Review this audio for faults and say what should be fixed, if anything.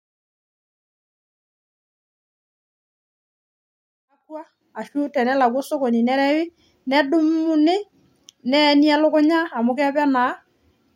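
No faults; nothing needs fixing.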